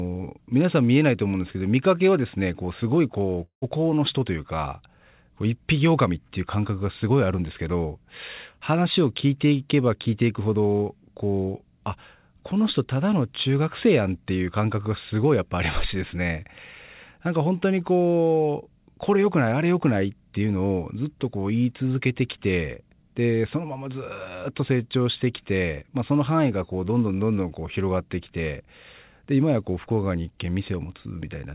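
At 3.44 s the audio stops short and does not resume until about 3.65 s. For roughly the first 180 ms the last sound is carried on as a buzzy, fading continuation, and then about 110 ms of near-silence follows before the audio returns with that stretch simply missing. This is likely a long network dropout, with the receiver concealing the gap. The band limit at 4 kHz throughout fits a narrowband G.711 call codec.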